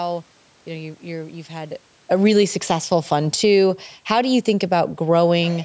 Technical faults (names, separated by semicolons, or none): automatic gain falling